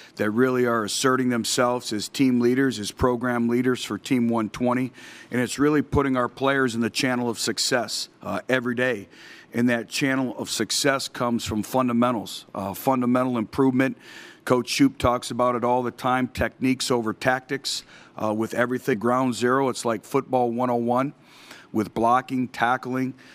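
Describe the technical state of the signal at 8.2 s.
At 8.2 s the signal is intact, with no audible fault at that moment.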